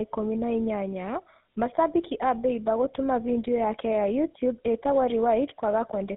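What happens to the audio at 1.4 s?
At 1.4 s, as throughout, tandem speech coding: AMR-NB output was re-encoded by GSM full rate, leaving speech rough, warbly and muffled, with nothing above 3.8 kHz.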